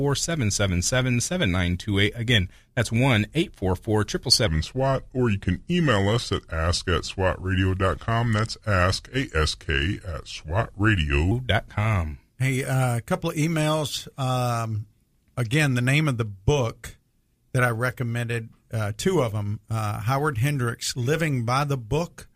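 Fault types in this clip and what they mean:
Section at the wrong speed: from 4.47 to 11.31 s the speech plays at 0.829 times its recorded speed, so it drags and drops by about three semitones, deepening the voice, then snaps back at 11.31 s. The likely cause is playback or editing against the wrong clock. On a spectrogram, the harmonics and formants in that stretch shift downward and crowd closer together. On the waveform, syllables look stretched out, with abrupt changes at both boundaries.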